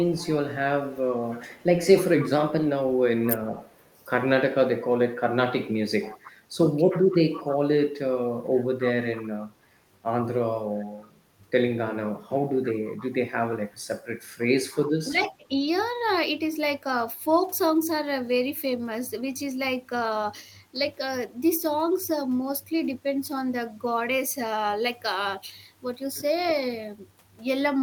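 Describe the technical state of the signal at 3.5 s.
At 3.5 s an echo leak is running, from 0.16 to 3.99 s. A faint copy of the speech returns about 310 ms late, roughly 25 dB down. A loudspeaker's echo canceller likely let it through.

Just before, from 3.28 to 3.41 s, speech was suppressed in double talk. The speech dipped by around 15 dB, in scraps totalling about 70 ms, as overlapping talk was likely turned down.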